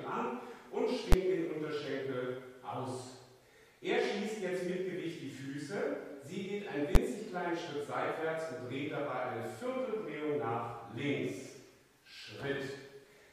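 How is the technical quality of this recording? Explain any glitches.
Two sharp bangs break the recording, at 1.12 s and 6.95 s. Both are invalid numbers at full scale. Each is a single very loud pop lasting about 12 ms. A calculation produced infinite or invalid values, and the output was pinned to maximum level for one short processing block, which fits a 512-sample block.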